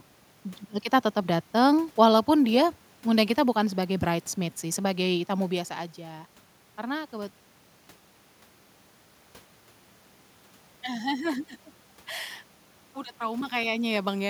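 Nothing stood out on listening; the room noise belongs to the recording space, and the shifts in level around 5.5 and 13.5 seconds sound like the talker moving relative to the microphone.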